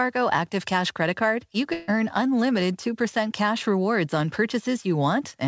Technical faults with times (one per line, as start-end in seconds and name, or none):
1.73-1.90 burst of packet loss